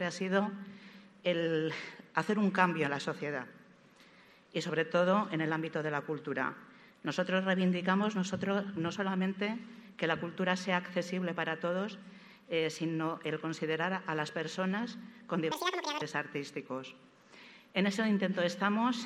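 From 15.52 to 16.02 s the audio is read two samples at a time, so it plays at double speed. Each pair of samples is taken as one frame, as if the stream held two channels or samples twice as wide. That half-second runs at 2x speed and jumps up 12 semitones, a full octave. On a spectrogram the harmonics in that stretch sit at twice their height, squeezed in time. The waveform looks compressed horizontally.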